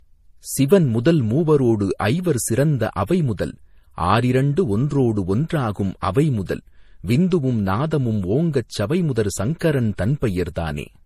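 A speech recording with a hard ceiling at 15.2 kHz for its whole length, shown on a spectrogram as a flat shelf with nothing above it, and a grainy, swirling layering of two different coding artefacts. The likely cause is transcoding between lossy codecs, pointing to a low-rate MP3 re-encoded as Vorbis at a similarly low rate.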